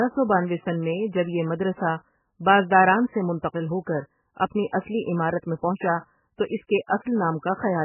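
From start to finish the speech is choked off above 3 kHz and sounds heavily watery and swirly, which is likely MP3 compression starved of bits, at a rate that fits about 8 kbps. The encoder drops the treble and lets weak frequency lines flicker frame to frame.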